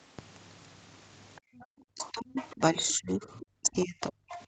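A speech recording with echo-control trouble, where the other side's voice leaking through appears four times: 1.36 to 1.65 s, 1.98 to 2.54 s, 3.40 to 3.85 s and 4.33 to 4.43 s. It is most audible at 1.98 s, only about 20 dB under the talker, and weakest in the first stretch, roughly 35 dB down. A second, fainter voice is heard, most likely loudspeaker playback that the echo canceller failed to subtract from the microphone. On a spectrogram it appears as faint, separate harmonic stripes laid under or between the main talker's formants, capped like everything else at the 8 kHz upper edge of the call path. From 1.39 to 1.56 s the background is gated by the echo canceller. For about a sixth of a second the room noise drops by about 32 dB, pulled down while the far end played, then recovers. The waveform shows the noise floor collapsing to near silence, and the spectrogram shows a short vertical gap in the background haze. 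Between 1.86 and 4.33 s the speech is suppressed in double talk, adding up to roughly a second and a half. The talker's level falls by as much as about 35 dB in chunks while the leaked voice runs, so syllables thin out or vanish. The likely cause is the canceller mistaking near speech for echo and attenuating both. These chunks read as abrupt notches in the waveform envelope and dark blocks across the spectrogram.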